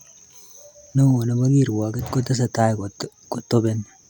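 No technical faults are audible anywhere in the speech recording.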